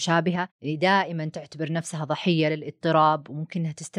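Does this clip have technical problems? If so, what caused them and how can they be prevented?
No, the speech in this clip carries no audible technical faults, so there is nothing here that needs a cause traced or a prevention step.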